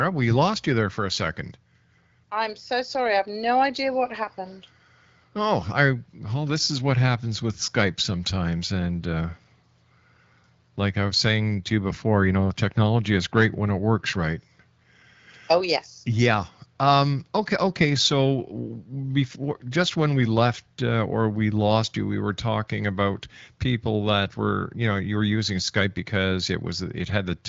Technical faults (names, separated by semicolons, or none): none